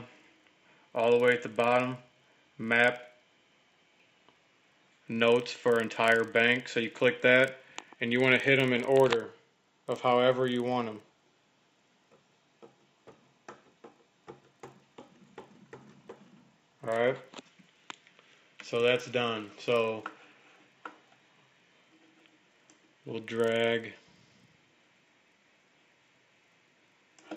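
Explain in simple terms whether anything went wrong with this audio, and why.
Something did go wrong, and it lasts the whole clip: a resampler restarted on every block. The audio was converted from 16 kHz to 48 kHz in separate 40 ms chunks, and each chunk was treated as if nothing came before or after it. Every chunk edge gets a tiny glitch, producing a steady tick 25 times a second. Unlike random dropouts, these ticks are perfectly regular, and they disappear whenever the sound goes quiet.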